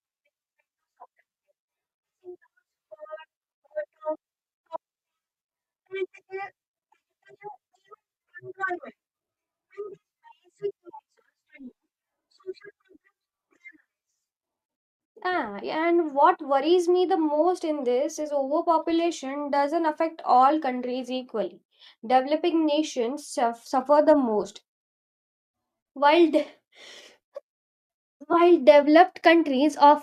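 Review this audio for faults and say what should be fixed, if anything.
Lost LE Audio frames at 28.32 to 28.34 s: about 15 ms of speech goes missing, which fits two dropped 7.5 ms frames. The decoder fills the gap by repeating the last spectrum with scrambled phase, leaving a brief noisy smear. To prevent it, strengthen the Bluetooth link with a shorter range, less interference, or more retransmission headroom.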